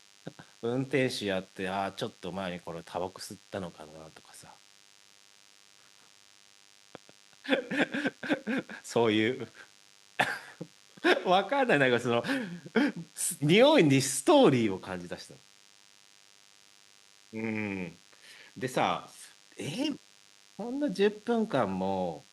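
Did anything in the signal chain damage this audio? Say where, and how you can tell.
Yes, at the analogue stage. A DECT cordless phone buzz runs under the speech for the whole clip: a thin, steady buzz at 100 Hz, rich in harmonics, sitting roughly 30 dB below the speech. A nearby DECT handset or base transmits a short radio burst every 10 ms. The analogue wiring or input circuitry picked that up and rectified it, turning each burst into an audible click. At 100 clicks per second these fuse into the buzz.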